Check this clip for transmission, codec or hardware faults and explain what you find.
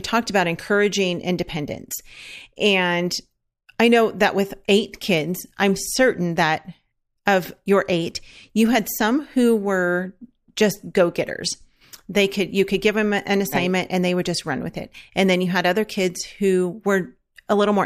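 No technical fault can be heard in this speech recording, and the signal stays intact and steady throughout.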